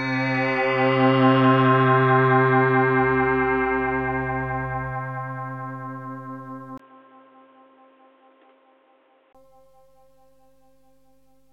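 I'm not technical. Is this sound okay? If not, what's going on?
No. From 6.78 to 9.35 seconds the sound turns dull, boxy and quieter, with faint new background noise. A tiny gap comes first. This is likely an input switched to a poorer device, such as a headset microphone that loses the crisp high end.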